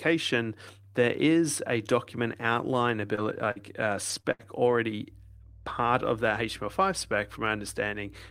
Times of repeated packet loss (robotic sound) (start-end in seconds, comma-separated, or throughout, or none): 3.15-4.91